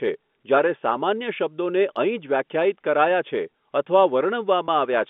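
Packet loss with pitch repetition at 4.66 to 4.68 s: one 20 ms packet went missing, and the receiver repeated the last pitch period, leaving a brief, slightly held buzz in the speech.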